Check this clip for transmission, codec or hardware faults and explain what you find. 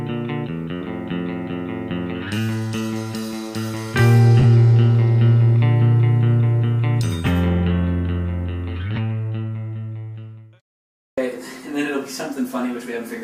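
Two brief transmission faults: frames out of order, at 0.81 to 0.87 s and 4.39 to 4.44 s. Adjacent frames arrived swapped and were decoded in that order, which fits two 20 ms frames exchanging places. Each spot plays as a short garbled flutter, with no time lost.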